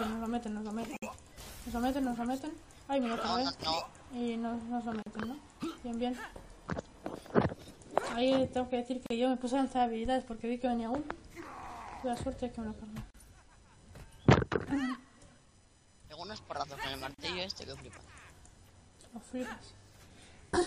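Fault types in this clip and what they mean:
Gap at a join of encoded pieces: brief dropouts cut into otherwise continuous sound, with smeared edges, and the audio resumes exactly where it left off. The first, at 0.97 s, lasts about 57 ms; later ones at 5.02, 9.06, 13.10 and 17.14 s each last about 40 ms, recurring every 4 s. Separately encoded 4-second segments were butted together untrimmed, so each join keeps encoder start delay and end-frame padding as silence.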